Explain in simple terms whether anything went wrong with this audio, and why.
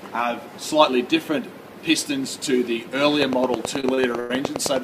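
A train of clicks runs from 3.22 s to the end of the clip at 4.83 s: a regular ticking of nearly ten clicks a second, each much like the last, sitting loudly on top of the sound and in its quiet moments too. Something is adding an electrical pulse again and again. The likely cause is interference from nearby equipment or a faulty connection or power supply.

Repeated stalls (stutter) hit between 3.80 s and 4.31 s, overlapping the clicks. The sound hangs and drags five times there. The audio arrived late or too slowly, so the player kept running out of material and stretched the last bit of sound to cover each wait. Those fill-ins add up to about 0.18 s, roughly a third of that half-second, with the longest near 0.1 s. Nothing is actually lost, but it comes out halting.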